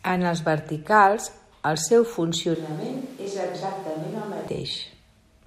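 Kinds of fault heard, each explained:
Switch to a distant microphone: right after "els verticals el seu", from 2.55 to 4.47 s, the speech abruptly turns roomy and hollow, thinner in the bass and a few dB quieter, with more room noise. Likely the close mic dropped out and a farther one took over.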